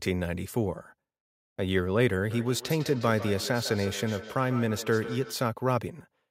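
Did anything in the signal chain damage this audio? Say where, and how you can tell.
Yes: feedback echo between two devices, in call processing, 2.3 to 5.4 s. Sound recurs roughly every 150 ms, about 12 dB down, thinner and more ringing each pass, unlike a single reflection.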